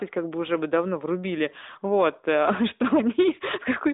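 Nothing faulty can be heard anywhere in the speech.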